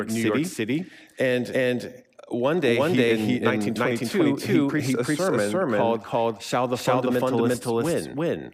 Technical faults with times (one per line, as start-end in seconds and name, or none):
0.00-8.54 doubled audio track